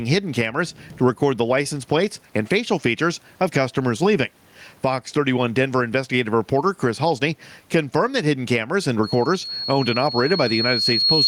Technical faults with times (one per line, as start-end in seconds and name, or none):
0.00-11.27 gain pumping
9.03-11.27 loudspeaker feedback squeal